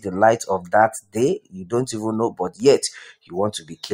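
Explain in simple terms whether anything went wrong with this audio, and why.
A speech-style noise suppressor was left running here, which is a classic case of a noise suppressor applied to music or sounds. It's built to clean up talking, so anything steady, lingering or roomy looks like background noise to it, and it keeps turning that down. Across the whole clip the level swings noticeably up and down as it grabs and lets go, so the sound pumps and gets thinner in places instead of sitting still.

The worst moments are clear spots of sound cut by the noise suppressor, where it pushed things down harder than elsewhere: about 1.01 to 1.16 s, 1.39 to 1.73 s, 2.3 to 2.62 s, 3.11 to 3.34 s, and 3.58 to 3.85 s. In each one the held or fading part sinks away or its tail gets chopped short, so it sounds like the sound briefly ducks out.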